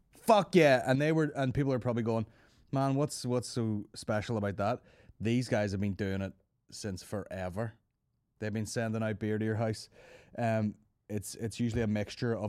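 At 0.95 s one channel drops out, likely because one side of the stereo feed stops carrying signal, and it stays lost to the end. In the mono sum, sound common to both sides falls abruptly by about 6 dB, and anything carried only by the missing side disappears.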